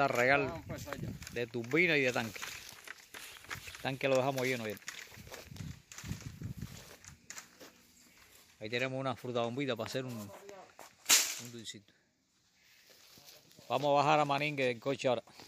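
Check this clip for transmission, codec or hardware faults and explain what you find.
Nothing in the transmission path, codec or hardware audibly degrades this clip, so there is nothing to report.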